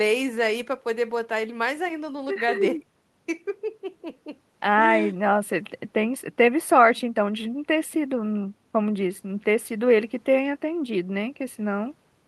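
A spoken-word recording with nothing technically wrong to point to anywhere along its run.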